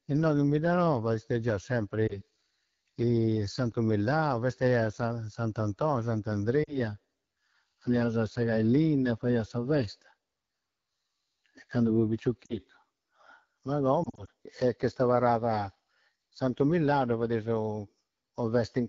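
Throughout the speech, the AMR wideband (HD Voice) codec is working at one of its lowest rates, which fits about 8.85 kbit/s. Too few bits reach its pulse-driven vocal tract model, so the voice sounds plainly rough and raspy from start to finish.

Lost AMR speech frames occur at 2.07 to 2.21 s, 6.63 to 6.75 s, 12.46 to 12.54 s and 14.03 to 14.30 s. Radio errors corrupted frames, and the decoder filled each gap from the last good pitch and tract settings at falling gain. The first gap is a brief dip, fitting 20 ms lost. The middle two, about 40 ms each, drop to near silence. The last scatters about 100 ms of loss over 240 ms, with a weak, rough recovery.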